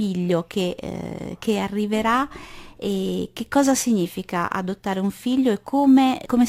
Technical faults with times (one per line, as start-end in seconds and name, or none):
0.00-6.49 crude rate conversion